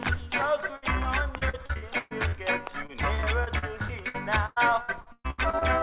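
A burst of packet loss at 0.76 to 0.84 s left a gap of about 62 ms. The receiver filled it by extending the last sound while fading it down, then resumed about 60 ms further on, so a short piece of audio is missing.

Repeated packet loss (robotic sound) follows from 1.38 to 2.35 s, with seven gaps covering about 35% of that stretch (longest 125 ms). It returns from 2.87 to 5.63 s with fourteen gaps covering about 26% (longest 121 ms). Each hole is patched by continuing the previous sound, and the next loss follows soon after, so the audio turns choppy with pieces missing. Throughout, nothing sounds above 4 kHz, which points to a narrowband call codec such as G.711.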